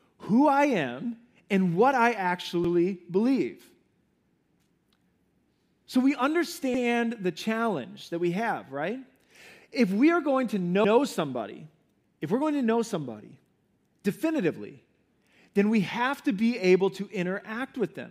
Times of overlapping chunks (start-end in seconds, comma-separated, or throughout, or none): 2.64-2.74, 6.74-6.84, 10.84-10.94, 14.94-15.04